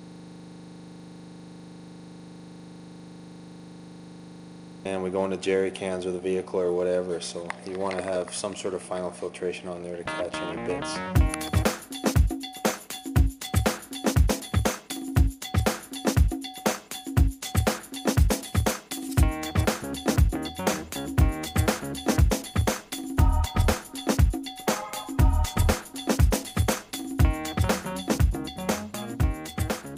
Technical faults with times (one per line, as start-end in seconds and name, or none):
0.00-4.85 system hang loop